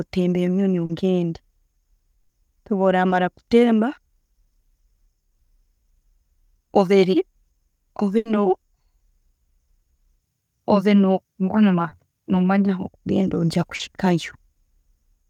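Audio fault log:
0.85–0.91, 3.09–3.13, 11.89–11.93, 13.75–13.81, 14.53–14.57: short concealed packet loss. At each point 20 to 40 ms of the speech never arrived in time, and the receiver covered the hole by extending the last sound, pitched if voiced and as shaped noise if not, then crossfaded back. The result is a momentary smear or wobble, and a brief consonant may disappear.
2.21–2.31, 8.17–8.27: burst of packet loss. Here about 80 ms went missing in one run, too long to hide cleanly. The concealment carries the last sound forward and fades it as the gap lengthens, so a voiced stretch becomes a steady buzz and unvoiced material a dying hiss. The speech then resumes further along with the lost section gone. The fade and the skipped content set these apart from the shorter smears.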